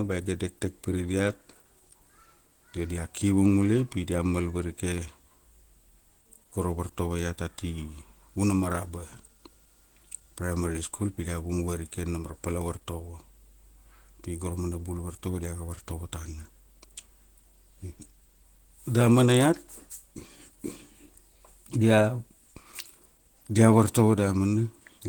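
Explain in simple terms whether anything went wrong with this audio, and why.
From start to finish the speech has a hoarse, rough and grainy quality, which points to heavy squeezing by a low-rate encoder, most likely Opus compression in its speech-oriented hybrid mode. The top end still reaches right up, though it's plainly degraded throughout.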